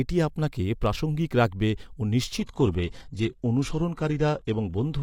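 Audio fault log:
2.38–5.02 s, adaptive stream at a lower bitrate: just after "আপনাকে প্রাসঙ্গিক রাখবে ও" the speech abruptly loses air and sibilance, with no gap, because the stream switched to a much cheaper encoding, one that sounds like low-bitrate HE-AAC replacing a clean AAC stream. On a spectrogram the band above 12.3 kHz is empty and the upper treble looks smeared and patterned where it is reconstructed. The waveform envelope stays continuous across the switch.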